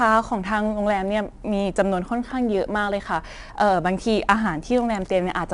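From start to finish the speech carries 4-bit ADPCM compression: each sample is a coarse step off a prediction, so a gritty hiss rides every loud syllable and sharp attacks crunch. Nothing above 10.7 kHz, which fits roughly 22 kHz sampling near 89 kbps.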